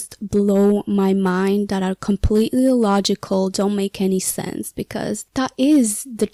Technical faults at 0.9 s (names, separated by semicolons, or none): hard clipping